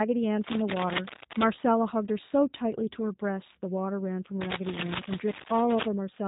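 A short speech clip that's been squeezed through a G.729 codec the whole way, and you can hear it plainly. Nothing comes through above 3.8 kHz, so everything sounds boxed-in and telephone-like, and the speech has that slightly rough, synthetic texture you get when a voice is rebuilt from a vocal tract filter, a pitch predictor and a handful of pulses per frame. The rasp fits a low-rate VoIP link around 8 kbit/s. On top of that there are two stretches of cable scratch noise, from 0.42 to 1.52 s and again from 4.41 to 5.87 s. Each one is dense, uneven scratching and rustling laid over the speech, most likely a worn cable or connector being moved so its contact resistance jumps around. The first burst sits a bit below the speech. The second is louder, roughly as loud as the speech itself, so it really competes with it.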